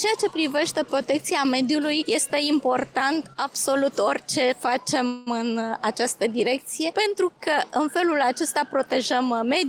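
A call audio freeze runs from 5.07 to 5.28 s. For about 0.19 s the sound stops moving forward and the last fragment is stretched into a fading buzz or hiss that never drops to silence. Playback then resumes exactly where it left off, so nothing is lost but everything after is pushed back by about 191 ms. The likely cause is packets held up in transit, leaving the jitter buffer empty so the receiver had to fill the gap itself.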